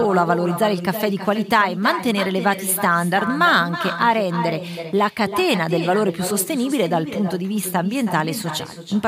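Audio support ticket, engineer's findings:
Whole clip: every phrase shadowed by a quieter, thinner copy of the speech arriving around a third of a second later, about 10 dB below the direct sound. Fault: echo with no canceller. Far end playing the call on a loudspeaker; its microphone picks up the playback and returns it over the network round trip. No echo cancellation active to strip it. Check far-end AEC enablement, speakerphone mode.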